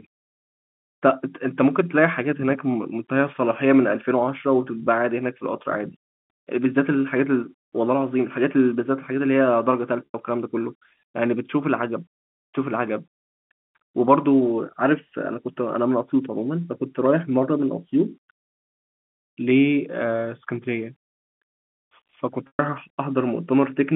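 Packet loss with pitch repetition occurs at 10.07 to 10.14 s and 22.47 to 22.59 s. About 90 and 120 ms of audio went missing. The receiver repeated the last pitch period, giving a brief buzzy hold that fades out.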